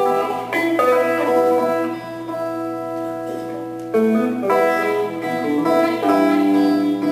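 Sample clock jitter runs throughout: an unstable converter clock of roughly 10 microseconds rms adds hiss sitting about 30 dB below the sound, strongest on loud, bright passages.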